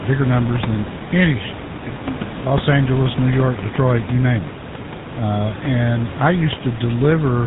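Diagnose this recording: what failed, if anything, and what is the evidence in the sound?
Codec stage: throughout, the speech has a plainly audible buzzy, gravelly roughness and nothing above 4 kHz, which fits the GSM full-rate codec at 13 kbit/s. It rebuilds speech from a vocal-tract model driven by regular pulses, keeping only every third excitation sample.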